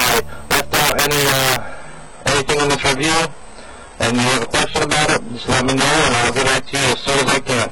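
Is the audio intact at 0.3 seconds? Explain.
No. Integer overflow affects the audio at 0.3 seconds, as it does across the whole clip. The signal is driven about 6 dB past the largest value the integer format can hold, and instead of being limited, every sample that exceeds it wraps around to the opposite extreme. Around 7 percent of samples go over, so the loudest moments jump across the full range and come out as harsh, violent cracks, far sharper than ordinary clipping.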